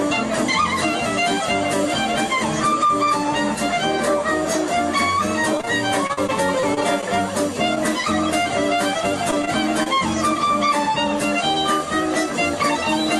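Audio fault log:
5.57 to 5.65 s, short concealed packet loss: two back-to-back holes of about 20 ms each never reached the decoder, so the receiver carried the preceding sound forward. That is heard as a brief smear, and on a spectrogram the harmonics flatten into a smooth copied patch before the real detail resumes.
5.65 s, short stall from a late packet: the jitter buffer ran dry and the last sound was stretched by about 17 ms until the packet arrived, with nothing lost. A slight hold or dip is heard, and the waveform shows a repeated, slightly flattened cycle.
6.07 to 7.06 s and 9.31 to 9.88 s, repeated packet loss (robotic sound): seven gaps in the first stretch and four in the second, the longest 37 ms and 26 ms, each patched by extending the prior sound. About 12 to 14 percent of each span is synthetic, giving a choppy texture. The spectrogram shows repeated vertical seams and smeared bands.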